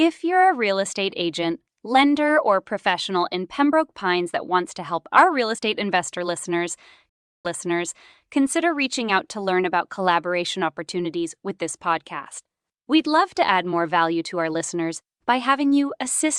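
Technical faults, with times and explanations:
7.09 to 8.27 s, stream reconnect: The speech drops out for about 0.35 s. The connection broke and the player went silent. It then reconnected and started a new decoder partway through the stream. The server resent a burst of earlier audio, so the speech resumes 0.82 s before the point where it stopped, and a short stretch is heard twice. The fresh decoder has no prior state, so its first frame fades in.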